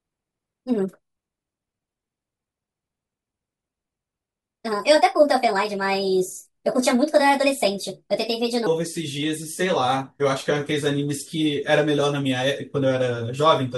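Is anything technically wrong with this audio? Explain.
Yes. From 0.0 to 8.67 s the clip has a wrong sample rate fault. The speech runs at 1.38 times its natural speed, and the pitch sits about 5.5 semitones too high. That fits audio recorded at 32 kHz and played back at 44.1 kHz with no conversion between them. Each sample passes too quickly, so timing and pitch scale together by the same ratio. The voice sounds thin, chirpy and rushed.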